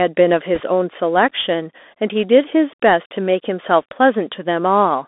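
From the start, the speech carries the sound of a Bluetooth CVSD headset codec. The band runs only from about 250 Hz to 3.6 kHz, which fits the narrowband headset path. CVSD sends one bit per sample, stepping up or down with an adapting step size. Here the damage is plainly audible. Loud, bright sounds outrun the step and smear. S sounds turn scratchy. A granular hiss sits under everything.

From 0.55 to 0.61 s come bit errors on a Bluetooth voice link. Some bits in the CVSD stream were flipped, at a rate of a few percent. Each bit only nudges the signal by one small step, and the error fades. So there is no sharp click. Instead, a brief burst of rushing, crackly noise rides on the speech for about 60 ms, then clears.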